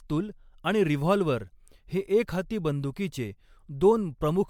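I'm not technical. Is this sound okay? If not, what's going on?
No, it isn't quite right. The whole clip has generation loss: the speech sounds swirly and hollow, with a watery, smeared quality, and the starts of sounds come across softened instead of crisp. That's likely from the recording being saved in MP3 format, opened and saved again about seven times in a row. Each save throws away slightly different detail, so the small flaws build up into that washed-out, phasey sound.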